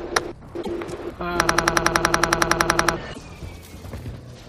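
At 0.59 to 0.69 s there is damaged data in the compressed stream. The decoder misreads the bad frames and loses sync. It hunts for the next frame header. A short glitch results.

From 1.48 to 2.96 s comes a system hang loop. The computer stalled while the sound hardware kept replaying its buffer. One 92.88 ms slice repeats 16 times, at 10.8 Hz. That fits a 4096-sample buffer. It sounds like a machine-gun stutter. About a second and a half of audio is lost.

At 3.10 to 3.19 s the damaged stream data returns. Another brief glitch follows.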